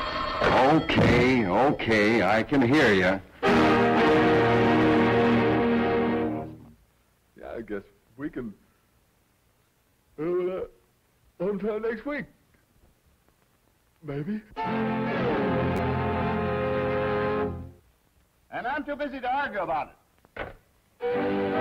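Repeated buffer at 0.35 s, 9.90–9.92 s and 15.77–15.79 s: new audio arrived late, so the last piece of about 10.7 ms, which fits a 512-sample buffer, was played again, once and then twice. Each repeat is heard as a brief click or buzz.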